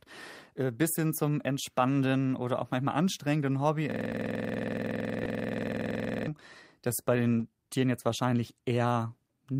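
At 3.92 s the speech locks into a system hang loop that lasts until 6.28 s. The driver or host froze while the audio hardware kept replaying its ring buffer, so one 46.44 ms slice repeats exactly, about 50 times, at 21.5 Hz. That fits a 2048-sample buffer. A 21.5 Hz repeat is too slow for a steady buzz, so it comes across as a rapid machine-gun stutter of one fragment. Because every cycle is identical, it can't be mistaken for a stall, which holds a single sound once.

Between 5.23 and 5.27 s, inside that loop, there is a short stall from a late packet. A packet missed its deadline, the jitter buffer ran dry, and the receiver stretched the last sound for 20 ms until the data arrived. Nothing is lost; it resumes where it stopped, and the playback delay grows by 20 ms. What separates it from the loop is that it is a single brief held sound, possibly with a slight buzz or dip, with no repetition.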